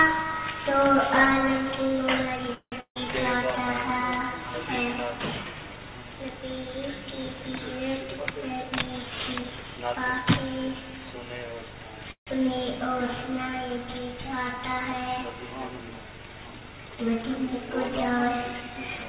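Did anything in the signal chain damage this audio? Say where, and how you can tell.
Yes. The damage is at the network and jitter-buffer stage of a call path. The band stops at 4 kHz with the grainy floor of G.711 mu-law coding at 64 kbps.

There are two call audio freezes, from 2.54 to 2.74 s and from 12.11 to 12.29 s. In each, the last sound is stretched into a fading buzz that decays to silence, about 80 ms of it in the first and 110 ms in the second. The sound then resumes exactly where it stopped, so nothing is lost, but the audio ends up 179 ms and then 152 ms later. The likely cause is delayed packets draining the jitter buffer.

Right after the first freeze, a long network dropout runs from 2.80 to 3.06 s. The receiver again fills with a fading continuation of the last sound for about 150 ms, including roughly 90 ms of silence. When the audio returns, it has jumped ahead: about 160 ms of material never plays. 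A skip over lost content like this, rather than a paused resume, most likely means the packets never arrived in time.

There are also two stretches of jitter buffer speed-up, from 8.03 to 10.81 s and from 18.11 to 19.05 s. The audio runs about 7% fast at unchanged pitch and sounds hurried. This is the buffer shrinking an overfilled queue by repeatedly cutting out short pitch-period-sized pieces. The first stretch removes roughly a fifth of a second, and the second removes about 70 ms.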